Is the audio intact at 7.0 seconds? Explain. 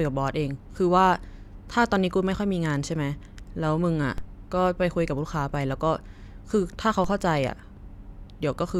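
No. A DC step at 7.04 s jumps the waveform's zero line by about −22 dBFS, heard as a low thump under the speech. The offset then decays away through a 5 Hz high-pass.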